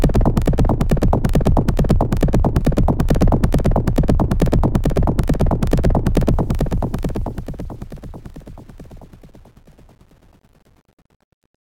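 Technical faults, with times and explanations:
2.60 s, lost LE Audio frames: one 10 ms frame dropped out, and the LC3 decoder filled the gap by repeating the previous frame's spectrum with randomised signs. The brief patch sounds like a short noisy smear in place of the original audio.
6.32 to 11.79 s, truncation distortion on a fade: the fade keeps only about 9 bits with no dither, so as the level drops the waveform collapses into coarse steps. It sounds gritty, worst from 7.62 s to the end.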